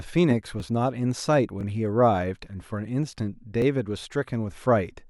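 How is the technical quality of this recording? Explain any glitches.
The speech has a recurring stitching glitch at 0.60, 1.61 and 3.62 s. These are overlapping chunks: the audio was handled in 1.0 s blocks, and each block began about 6.5 ms before the previous one ended, so that sliver plays twice. Each join sounds like a brief click or stutter. On the waveform, the repeated fragment shows as a small discontinuity. On the spectrogram, each join shows as a thin vertical broadband line.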